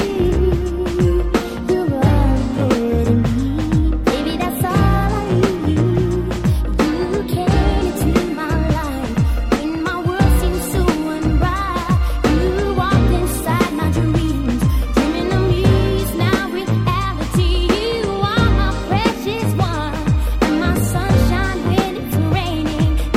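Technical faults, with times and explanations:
No technical faults found.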